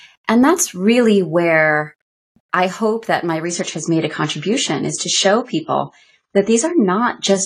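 Adaptive stream at a lower bitrate from 3.45 s, just after "I hope that my", to the end: the speech abruptly loses everything above 10 kHz and turns smeary, with no gap, which fits a switch from about 96 to 24 kbit/s.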